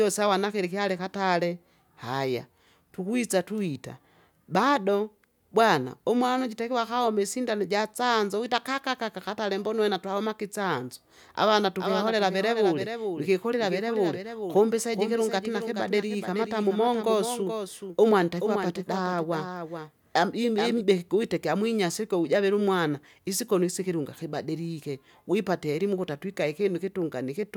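From 11.79 s to 20.81 s, after "uwena twahomake itsanzo avana" and until "kuwite kyamwinyasi ikyo ujavila", the speech carries a doubled audio track: one full-band copy trails by about 400 ms, around 10 dB quieter, likely from a second, slower capture path. Unlike room echo, it has no decay, and it starts and stops abruptly.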